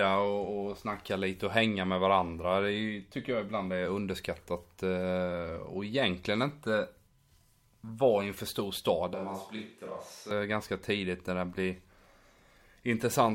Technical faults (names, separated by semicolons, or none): switch to a distant microphone